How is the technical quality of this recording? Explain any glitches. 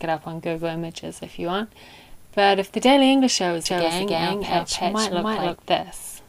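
There is one clear glitch. A doubled audio track runs from 3.66 to 5.56 s. A second, full-band copy trails roughly 300 ms behind at about the same level, likely from a slower capture path or an out-of-step edit. It adds a dry, distinct repeat with no room tail, switching on and off abruptly.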